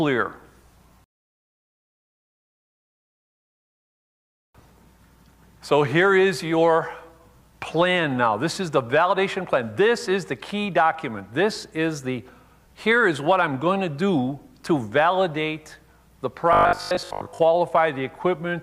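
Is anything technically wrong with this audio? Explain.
Yes. Robotic sound from repeated short buffers appears from 16.53 to 17.39 s. This is likely caused by audio arriving too seldom, so playback keeps reusing a 20 ms slice while the real material is skipped. Roughly seven tenths of that stretch is repeated rather than new. Because each 20 ms loop restarts, a rigid 50 Hz buzz is stamped onto the sound, which turns metallic and mechanical while loosely tracking its original contour.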